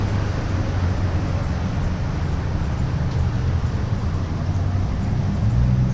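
Nothing stood out as a technical problem on listening to this recording of sounds.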